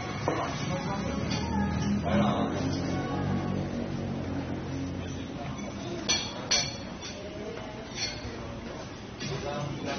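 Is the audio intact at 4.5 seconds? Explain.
No. AAC compression damage runs through the whole clip, including 4.5 s. Nothing sounds above 6.3 kHz. Coarse quantisation, likely at around 24 kbps, leaves the sound dull and smeared.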